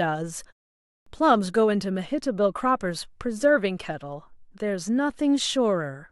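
Clipped start after a pause, 0.77 to 1.06 s: the output device dozed during a 0.33 s silence, swallowing 0.29 s, so speech bursts in missing its opening sounds.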